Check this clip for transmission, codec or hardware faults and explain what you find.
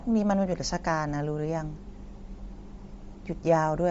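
One codec fault runs through the whole speech clip. Throughout, the voice sounds grainy and breathy, with nothing above 7.8 kHz, which points to Bluetooth LC3 compression, likely at 32 kbps with 10 ms frames, noise-filling the discarded upper spectrum.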